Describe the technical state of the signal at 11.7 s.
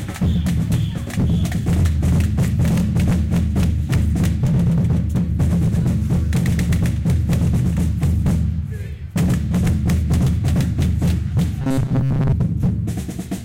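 At 11.7 s the sound is inside a stretch of robotic sound from repeated short buffers, 11.61 to 12.33 s. A short slice, about 7.5 ms, is likely being replayed while fresh audio is late, imposing a rigid 134 Hz metallic buzz over most of the span. A spectrogram shows evenly spaced harmonic lines at multiples of 134 Hz, and the waveform shows identical repeating cycles.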